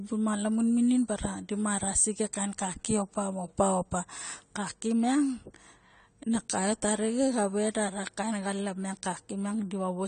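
A speech recording with plainly audible AAC compression damage from start to finish. Nothing is present above 9 kHz, and the upper band sounds dull and smeared, with a warbling, fizzy texture on sibilants and sustained vowels, likely from AAC-LC coding at a bitrate that fits 32 kbps.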